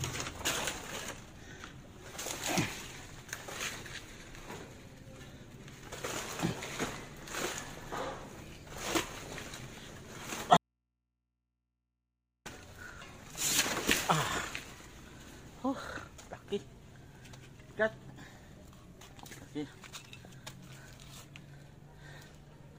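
The signal feeding the chain was likely lost between 10.57 and 12.46 s while the path downstream stayed live: an audio dropout to a faint residue. For about 1.9 s the sound cuts out abruptly, leaving only mains hum roughly 45 dB below the normal level.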